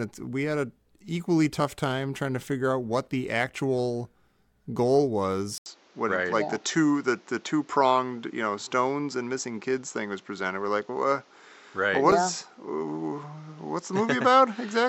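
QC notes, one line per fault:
1.6 s and 12.12 s, dropped buffer (overrun): the sound jumps ahead about 20 ms, likely because samples weren't collected before the hardware overwrote them.
5.58 s to end, input switched to a poorer device: an 80 ms gap, then a narrower, duller sound with new background noise about 35 dB down and roughly the same level, likely a change of input device.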